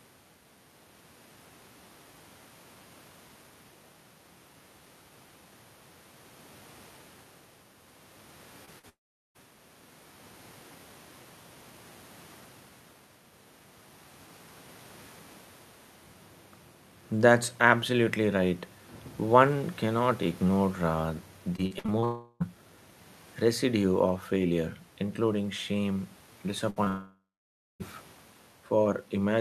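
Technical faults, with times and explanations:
8.65 to 8.69 s and 8.79 to 8.85 s, short concealed packet loss: Two brief gaps of 20 and 40 ms. The receiver continued the preceding sound across each, leaving a quick smear or wobble.
8.89 to 9.37 s, long network dropout: The sound carries on briefly as a fading buzz or hiss, then about 400 ms of silence. This is likely a network dropout. Nearly half a second is lost.
21.57 to 22.04 s, repeated packet loss (robotic sound): Five gaps, the longest 55 ms, are patched over a third of this span. Repeated patching makes the sound choppy, with pieces missing.
22.04 to 22.42 s, long network dropout: About 360 ms is missing, likely through a network dropout. A continued, fading buzz or hiss fills almost all of it, with only a moment of silence.
26.70 to 26.78 s, burst of packet loss: About 60 ms is lost at once. The last sound is held and turned down, so it becomes a brief fading buzz or hiss.
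26.84 to 26.88 s, short concealed packet loss: A 20 ms gap is filled by continuing the prior sound. It gives a small smear just before the next fault.
26.88 to 27.82 s, long network dropout: About 920 ms is gone, likely from a network dropout. A fading continuation is followed by roughly 580 ms of silence before the sound resumes further on.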